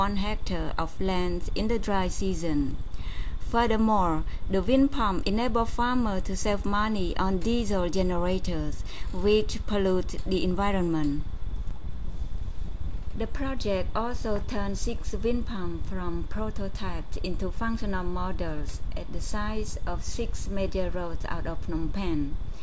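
No technical faults can be heard anywhere in this audio, so there are none to describe in time order.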